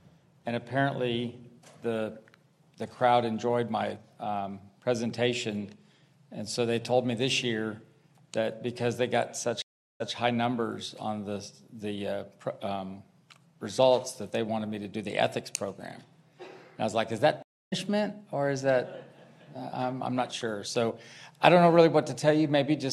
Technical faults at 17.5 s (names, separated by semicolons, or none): stream reconnect